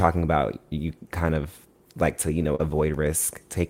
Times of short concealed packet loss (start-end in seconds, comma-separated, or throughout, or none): 2.55-2.61